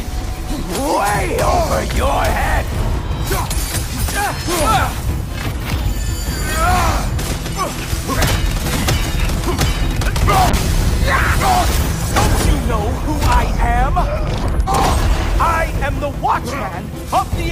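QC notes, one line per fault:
2.47 to 2.51 s, chunks out of order: a 10 ms chunk played three chunks late, so the audio jumbles briefly at the hard joins.
10.51 to 15.37 s, call bitrate drop: the encoder fell from 128 to 28 kbps for about 4.8 s, coding coarsely and trimming highs, so the sound turns rough and muffled.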